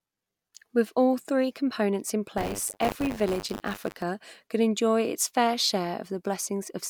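After "all three components in", from 2.37 to 4.03 s, a robotic 100 Hz buzz rides the speech until "could enjoy its fair". This is buffer tearing: each 10 ms buffer splices in a small slice of audio from about 40 ms earlier.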